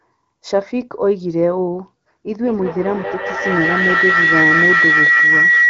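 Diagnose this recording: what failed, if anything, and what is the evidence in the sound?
A tone near 2 kHz swells from 2.33 s to the end, with the loop repeating roughly every 200 ms and peaking about 5 dB above the speech: feedback howl, an acoustic loop between two devices.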